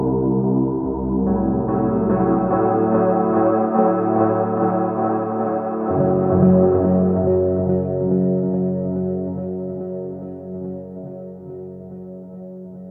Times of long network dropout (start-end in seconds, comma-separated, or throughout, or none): none